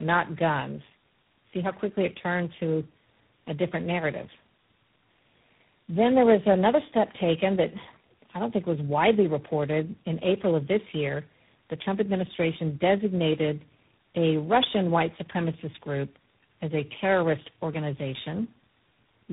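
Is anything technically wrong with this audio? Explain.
Yes, the speech shows tandem speech coding throughout. The audio sounds passed through three speech codecs in turn, decoded and re-encoded at each hand-off. That fits a chain of GSM full rate, G.729A and G.726 at 24 kbit/s, linked by G.711 A-law. Each stage re-codes the previous stage's damage, so the speech is rougher, noisier, muffled and warbly, with nothing above 3.8 kHz. A single codec or plain band-limiting would cut the bandwidth without this stacked, compounding roughness.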